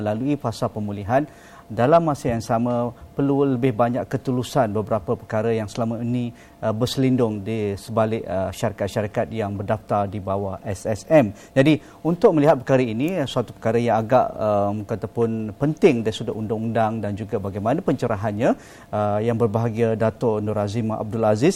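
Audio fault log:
1.84–1.97 s, 12.25–12.51 s, 15.85–15.87 s: hard clipping. Peaks overran a stage's maximum level by about 2 dB, about 4 dB and about 2 dB, so their tops were cut flat. The flattened waveform adds high harmonics, heard as brief crackle, harshest at 12.25 s.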